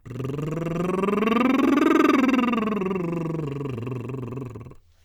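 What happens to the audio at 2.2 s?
Nothing goes wrong at 2.2 s; the music plays through that moment intact, with no dropout, click or other fault.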